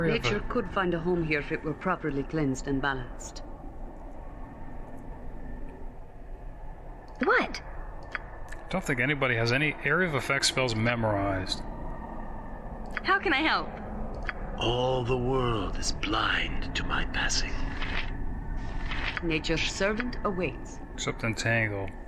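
No technical faults can be heard anywhere in the audio, and the signal holds steady throughout.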